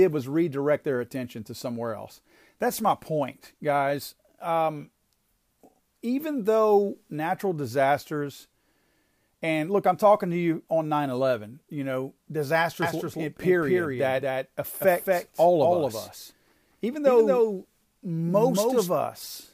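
From 12.82 s to 18.88 s the speech carries a doubled audio track: a full-band copy trails about 200 ms behind, about 5 dB quieter, likely from a slower second capture path. Unlike room echo, it has no decay, and it starts and stops abruptly.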